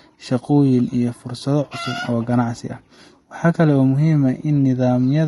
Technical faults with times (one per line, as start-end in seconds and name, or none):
0.00-5.27 low-delay AAC compression
2.95-2.98 AAC frame loss with concealment